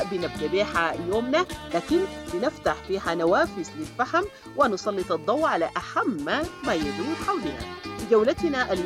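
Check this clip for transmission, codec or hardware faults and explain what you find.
Two faults show up, both from a 2G mobile phone close to the recording chain.

From 1.46 to 2.89 s, a galloping dit-dit-dit of brief raspy buzzes sits roughly 25 dB below the main sound. These are GSM signalling bursts: a nearby handset sending short groups of transmissions at 217 Hz, which the audio circuitry rectifies into audible pulses.

From 2.93 to 5.42 s, a hard, steady, harmonic-rich buzz at 217 Hz runs continuously at about 32 dB below the signal, unrelated to the audio itself. This is GSM phone buzz, a handset now transmitting in bursts 217 times a second as in a call, its radio bursts rectified by the audio electronics.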